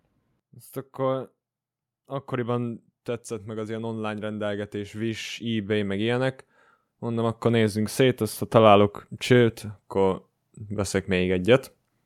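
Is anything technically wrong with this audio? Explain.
Yes. Automatic gain rising occurs twice in this speech, from 3.44 to 6.37 s, just after "akkoriban tetszett", and from 7.02 to 11.74 s. Each time the gain control judged the input too quiet and slowly raised it by about 7 dB. Voice and background noise swell together, which separates it from a talker simply speaking louder.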